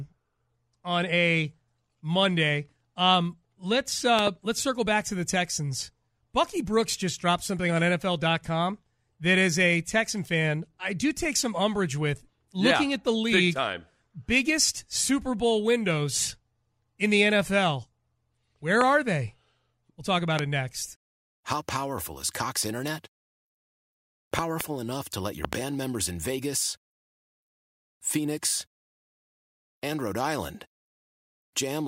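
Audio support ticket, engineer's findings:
Loud pop, five events. Likely a voltage step from a loose connector, switch or static discharge, passed through and shaped downstream. Result: pops some 20 dB above the speech, which carries on underneath. Double pops at 4.19–4.29 s (before "let's circle back to"), 24.39–24.63 s (before "enough to let your") and 25.45–25.55 s. Single pops at 18.81–18.83 s and 20.39–20.41 s (between "talk about" and "it next").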